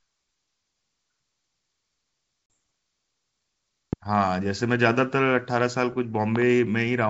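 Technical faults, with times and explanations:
2.54 s, packet loss on an ADPCM call: a 40 ms hole, roughly two packets, drops to hard-edged silence. The decoder's predictor and step size lose track of the sender's, so the speech resumes with mild distortion that settles within tens of milliseconds, unlike a pop laid over continuing sound.
3.93 to 3.95 s and 6.36 to 6.44 s, loud pop: sharp pops peak about 10 dB above the speech, one in the first place and two in quick succession in the second, while the speech carries on underneath with no gap. They likely come from a voltage step, such as a plug, switch or static discharge, shaped by the circuitry downstream.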